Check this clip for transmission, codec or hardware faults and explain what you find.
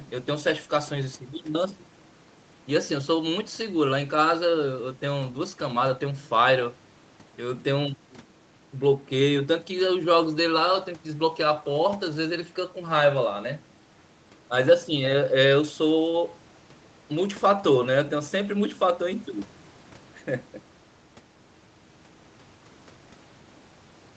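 No transmission, codec or hardware faults turn up in this speech clip, whose call path limits the sound to nothing above 8 kHz as expected.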